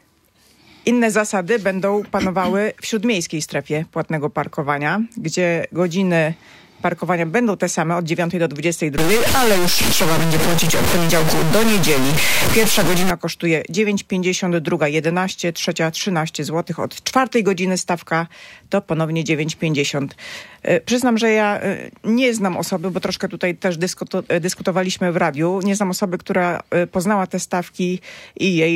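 From 8.98 to 13.1 s the sound turns coarse and grainy, with distortion that shifts as the sound changes. The error is roughly as loud as the sound itself. Quiet parts sputter or vanish. This is likely low bit depth without dither, truncated to around 3 bits.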